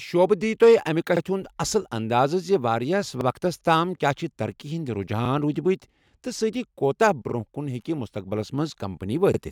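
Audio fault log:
1.17–1.21, 3.21–3.26, 5.26–5.30, 7.30–7.34 and 9.34–9.39 s: overlapping chunks. The speech is handled in 2.0 s chunks, and each new chunk begins 44 ms before the previous one ended, so that slice plays twice at every join, heard as a brief stutter or click. Unlike a dropout, nothing goes missing; the sound is doubled. Unlike random buffer glitches, the stutters arrive at a steady spacing of about 2 s.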